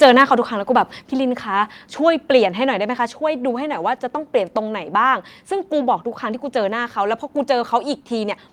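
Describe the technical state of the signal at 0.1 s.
At 0.1 s the speech is in the middle of a harsh, crackly burst running from 0.02 to 0.22 s, which sounds like microphone overload. The likely cause is input gain set roughly 4 dB too hot, so the loudest peaks ran into the converter's ceiling and had their tops sheared off. On a waveform the peaks appear as flat plateaus, affecting only a small share of samples. A spectrogram shows a haze of high-frequency distortion smeared over that span.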